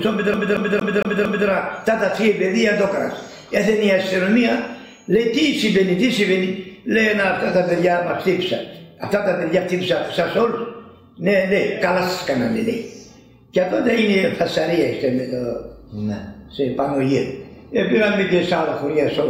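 From 0.34 to 1.48 s the audio is caught in a CD stuck on one turn: a 229 ms slice repeats five times, each pass ending in a brief mute as the laser jumps back one track at the same scratched spot. The result is a fast, even stutter.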